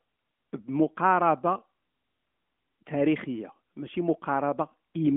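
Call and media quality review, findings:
Findings: no faults found in this speech clip; the AMR narrowband mobile codec path sounds as expected, with nothing passing above 3.6 kHz.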